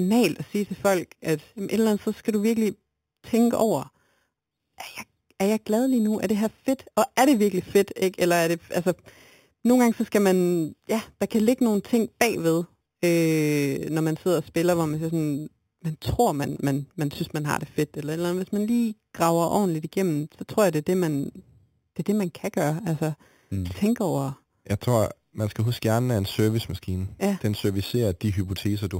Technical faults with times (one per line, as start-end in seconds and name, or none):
0.00-29.00 imaging from sample-and-hold upsampling